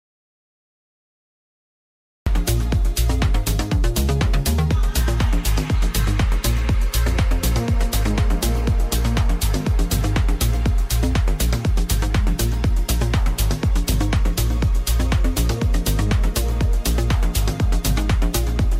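Audio dropout to silence from the very start of the clip until 2.27 s: the file opens in complete silence, with no room tone at all, before the sound comes in mid-flow. The input was likely lost, so silence was written throughout that gap.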